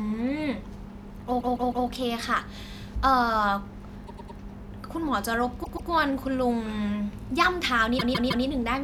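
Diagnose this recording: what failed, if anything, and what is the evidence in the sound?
Repeated frames at the codec stage: a short block of speech plays again several times in a row, producing a stutter at 1.40 to 1.87 s, 4.06 to 4.38 s, 5.63 to 5.89 s and 7.98 to 8.45 s. Each repeat lasts about 157, 105, 131 and 157 ms, heard three, three, two and three extra times. Identical compressed frames are being decoded more than once, so nothing is lost and the recording grows longer. Concealment of dropped packets would instead leave gaps or smeared, synthetic fill.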